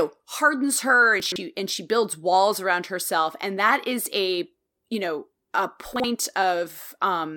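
At 1.2 to 1.36 s, between "hardens her" and "and she builds walls", the speech shows chunks out of order: a 40 ms block plays three blocks late, giving a jumbled moment with hard joins. After "a you know a", 5.96 to 6.04 s repeats this, one block late.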